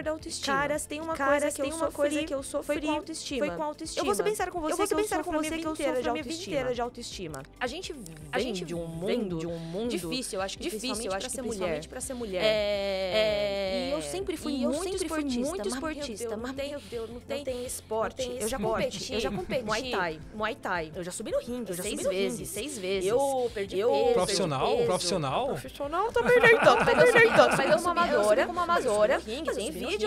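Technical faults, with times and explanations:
Throughout: doubled audio track, a full-band copy about equally loud trails by roughly 0.7 s, undecayed and uncoloured, unlike echo; likely a duplicated capture path.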